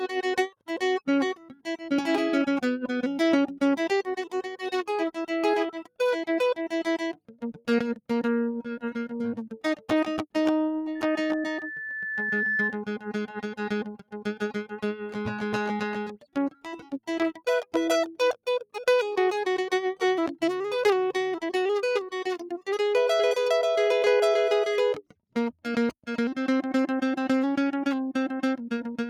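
A noise suppressor applied to music runs through the whole recording. A processor designed to clean up speech stays active, treats sustained tones, ambience and reverb as noise, and keeps pulling them down. The level rises and falls by around 5 dB as it reacts, so held parts pump and thin out while attacks pass mostly intact.

Sound cut by the noise suppressor is heard at 1.35–1.91 s, 5.7–6.0 s, 7.13–7.68 s, 13.99–14.14 s, 16.15–17.08 s and 24.97–25.36 s. Each time the suppressor misreads part of the music as noise and drops it by up to about 18 dB, for spans from a fraction of a second to about 0.7 s. Sustained and decaying material sinks or has its tail clipped.

A loudspeaker feedback squeal runs from 10.95 to 12.83 s. A microphone is picking up the loudspeaker it feeds, and at 1.8 kHz the gain around that loop exceeds one, so the tone feeds on itself. Over roughly one and a half seconds it swells to about the same loudness as the music, a single steady whistle sitting on top of the mix.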